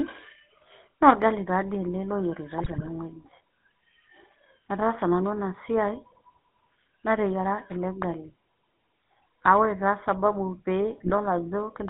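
Speech carried through the GSM full-rate codec, band-limited to about 150 Hz to 3.6 kHz, with a plainly buzzy, gravelly texture consistent with 13 kbit/s pulse-excited coding. GSM bit errors corrupt decoded frames from 2.58 to 2.89 s and again at 11.06 to 11.11 s, producing squawks and gargling bursts.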